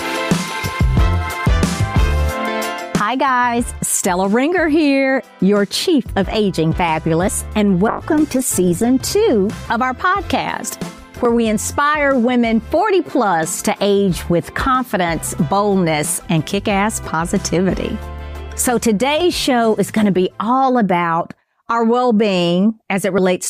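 Short skips of about 20 ms occur every 4 s, at 3.30, 7.28, 11.25, 15.23, 19.21 and 23.18 s, with the two sides butted together, likely audio missing between chunks at recorder boundaries. From 7.88 to 8.95 s the sound turns coarse and muffled with dulled highs, consistent with a call bitrate drop from roughly 128 to 16 kbps before recovery.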